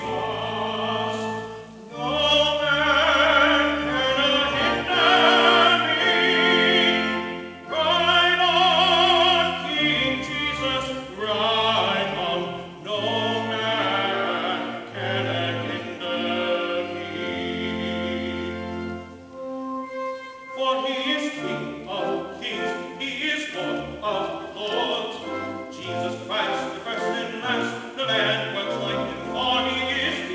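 No technical faults can be heard: the sound carries the ordinary character of a wideband call link, with nothing above 8 kHz, which fits G.722 at 64 kbps, and no dropouts, glitches or other disturbances anywhere in it.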